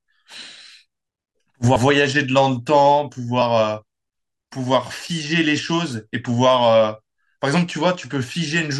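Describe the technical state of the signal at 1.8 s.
Right around 1.75 s there are compressed frames skipped. The sound jumps ahead about 70 ms, roughly three 24 ms frames.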